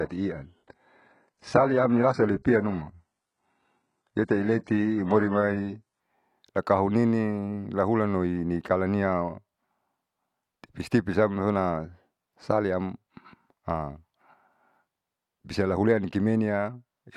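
From 0.0 to 6.0 s the speech plays from an adaptive stream starting at a low bitrate: dull, with synthetic-sounding treble and stronger codec smearing, which fits HE-AAC near 12 kbit/s. At 6.0 s, before "akahunining lahulanloi kalaniau", quality jumps without a gap, consistent with AAC-LC around 96 kbit/s.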